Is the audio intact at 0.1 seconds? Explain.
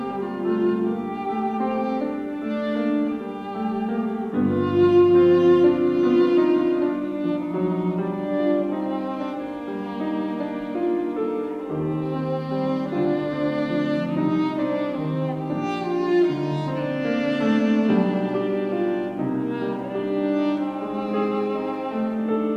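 Yes, the audio is intact at 0.1 s, with no dropout, click, distortion or other fault at that moment.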